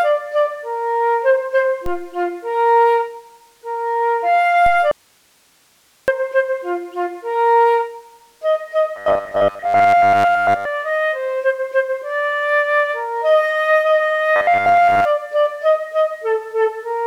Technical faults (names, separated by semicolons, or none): DC step; audio dropout to a faint residue; robotic sound from repeated short buffers